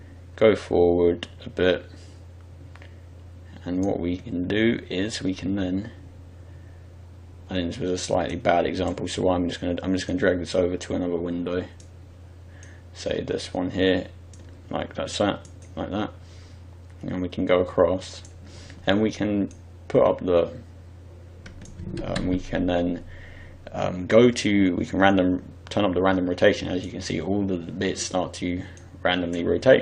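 Nothing in the audio stood out as a technical problem on listening.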